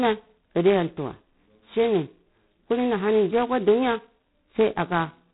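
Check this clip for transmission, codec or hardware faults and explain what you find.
There's one fault, and it runs through the whole speech clip: G.726 ADPCM coding, sounding like its lowest-rate 16 kbit/s mode. With only about two bits per sample describing the error against an adaptive prediction, a rough, rasping hiss rides the speech level, and nothing gets through above 3.9 kHz.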